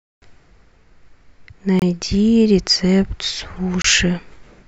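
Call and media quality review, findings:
Damaged data in compressed stream, 1.48–1.52 s: short glitch lasting about 44 ms. Decoder misreads corrupted frames, loses sync and skips forward to the next valid frame header.

Damaged data in compressed stream, 3.57 s: brief blip, same mechanism. Corrupt bytes in the stream cause a momentary garbled decode and a resync at the next frame boundary.

Gap between chunks, 1.79–1.82 s: hole of 25 ms in the speech, with no content lost. Points to chunked delivery or storage, with silence inserted at the join by codec padding or late chunk start in the player.

Gap between chunks, 3.82–3.84 s: identical 25 ms hole, recurring every 2.0 s, consistent with a chunk length of 2 s. Same join-level cause, with silence inserted at each chunk boundary.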